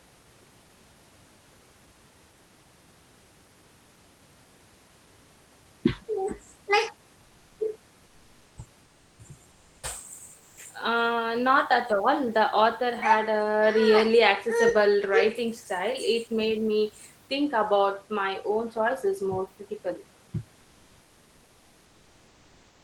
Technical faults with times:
7.25-7.59 comfort noise in place of the background
8.83-9.19 comfort noise in place of the background
9.51-9.83 comfort noise in place of the background
10.39-10.57 comfort noise in place of the background

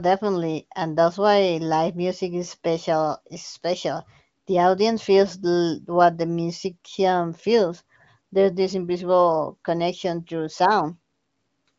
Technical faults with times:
none

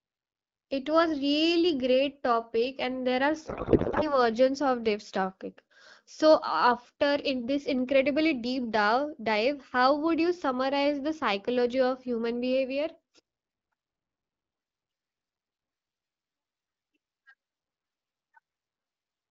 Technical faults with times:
3.47-4.24 codec payload misread

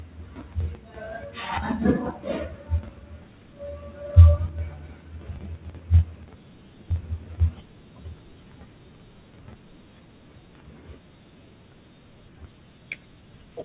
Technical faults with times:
none

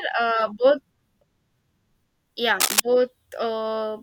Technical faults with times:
2.60-2.80 cable scratch noise

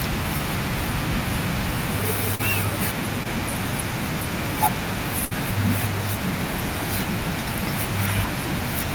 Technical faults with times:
0.37-0.41 short concealed packet loss
2.35-2.41 short concealed packet loss
3.23-3.27 short concealed packet loss
5.25-5.33 burst of packet loss

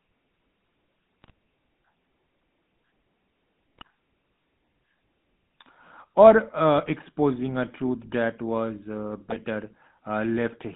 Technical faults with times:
0.00-10.76 GSM full-rate codec
1.22-1.31 GSM bit errors
3.78-3.87 GSM bit errors
6.78-6.91 GSM bit errors
9.29-9.39 GSM bit errors

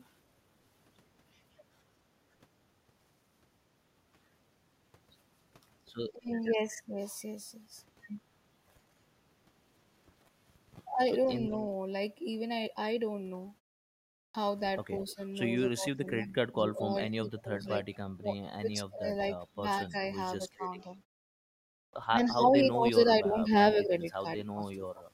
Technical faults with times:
14.12-14.34 clipped start after a pause
21.69-21.93 clipped start after a pause

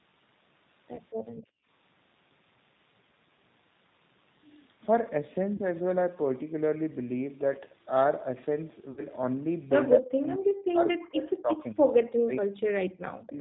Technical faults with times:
0.00-13.40 G.729 codec
0.96-0.99 VoIP packet loss concealed by the speech codec
5.56-5.62 VoIP packet loss concealed by the speech codec
8.91-9.03 VoIP packet loss concealed by the speech codec
11.42-11.80 speech suppressed in double talk

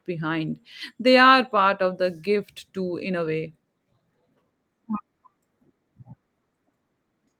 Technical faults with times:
none

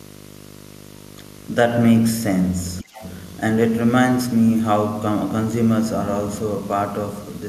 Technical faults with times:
0.00-7.48 video or display buzz
2.82-3.02 speech suppressed in double talk
2.94-3.11 other side's voice leaking through

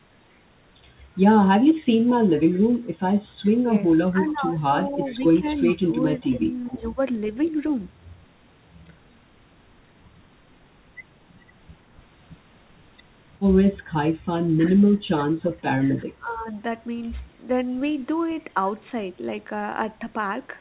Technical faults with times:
1.75-1.84 echo leak
2.53-2.60 echo leak
3.64-6.99 speech suppressed in double talk
4.28-4.32 echo leak
5.05-6.76 echo leak
7.42-7.70 echo leak
14.57-16.50 speech suppressed in double talk

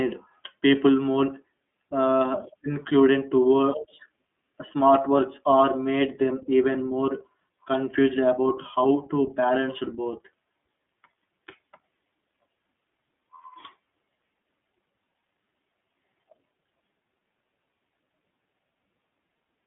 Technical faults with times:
0.00-19.66 iLBC codec

